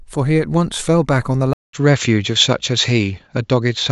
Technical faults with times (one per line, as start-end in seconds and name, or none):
1.53-3.91 input switched to a poorer device